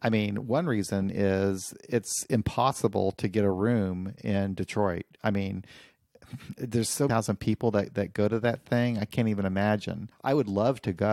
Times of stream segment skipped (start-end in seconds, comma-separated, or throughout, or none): 7.08